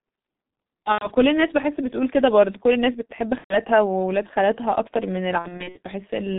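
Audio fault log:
throughout: G.723.1 codec. The speech is confined to roughly 150 Hz to 3.7 kHz, so it sounds muffled. The heavy coding damage, consistent with the 6.3 kbit/s mode, leaves it hoarse with smeared consonants because the voice model updates only every 30 ms. On a spectrogram, energy stops sharply at 3.7 kHz with an empty band above. Harmonics look blocky and coarse, and fricatives lose their fine texture.
0.92–1.13 s, 3.38–3.55 s, 5.39–5.78 s: VoIP packet loss concealed by the speech codec. At each gap the decoder repeats its last pitch and filter at falling gain, so the speech is stretched into a short, fading buzzy tone or coloured noise. The dropouts last about 90 ms in the first gap and about 120 ms in the second, which fits whole 30 ms frames. The third gap is scattered across about 360 ms in runs of up to 60 ms. A spectrogram shows flat, repeated harmonic stripes that dim, and the waveform shows a decaying periodic envelope. 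The speech stays weak briefly after each gap.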